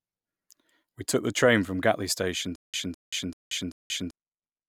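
From 2.56 to 4.11 s the speech falls into a stutter with silent gaps: a 207 ms fragment plays four times, each followed by 181 ms of digital silence, repeating every 388 ms. Unlike a seamless loop, the dead gaps point to a likely playback stall.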